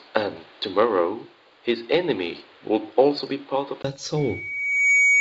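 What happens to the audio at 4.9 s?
At 4.9 s a loudspeaker feedback squeal is in progress, running from 4.17 s to the end of the clip at 5.20 s. The microphone re-captures its own loudspeaker, and loop gain above unity at 2.2 kHz lets a pure tone swell over most of a second to about 5 dB above the speech.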